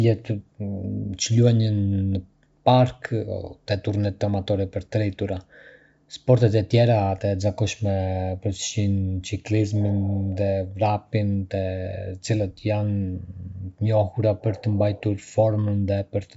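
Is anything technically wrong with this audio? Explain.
No, nothing is wrong.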